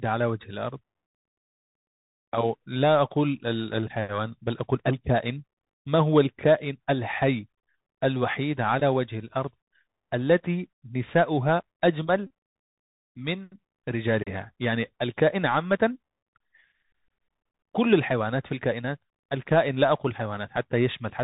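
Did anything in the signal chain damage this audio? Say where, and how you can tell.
Yes. The Bluetooth CVSD headset codec has narrowed the whole speech band. Nothing reaches above 4 kHz. S sounds turn scratchy, and a granular hiss sits under the speech. This fits a 64 kbps one-bit delta coder whose step size cannot keep up with fast changes.

At the wireless link stage, there are two short buzzes, at 8.80 to 8.82 s and at 12.27 to 12.30 s. Each is a Bluetooth headset packet repeated. Lost packets were replaced by replaying the last good one every 3.75 ms, which gives a buzz near 267 Hz. The second buzz is longer and fits about ten lost packets.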